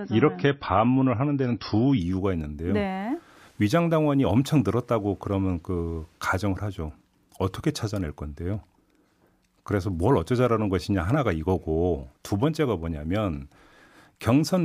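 Speech that opens on an adaptive stream starting at a low bitrate: for the first 2.0 s nothing is heard above 5.8 kHz, and coding artefacts are thicker, a sound that points to a low MP3 rate near 26 kbit/s. At 2.0 s the top end returns at once, fitting a switch to about 128 kbit/s. Unlike a fixed low-pass filter or a mid-stream bandwidth drop, the dull section sits only at the start and steps up seamlessly.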